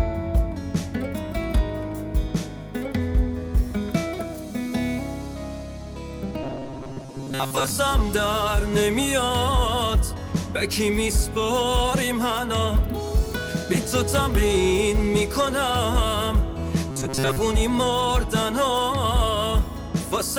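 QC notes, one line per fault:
6.43–7.70 s and 16.90–17.40 s, robotic sound from repeated short buffers: audio likely arrived late, so a 7.5 ms slice looped over most of each span, forcing a rigid metallic 134 Hz buzz.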